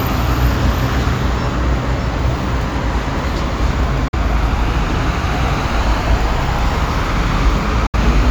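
A likely Bluetooth dropout cuts the audio to silence at 4.08 to 4.14 s and again at 7.86 to 7.94 s, about 46 ms and 70 ms lost, which fits two and three late packets discarded. Each gap has abrupt edges or a fade of a few milliseconds, and the sound resumes further along, as though it had kept playing.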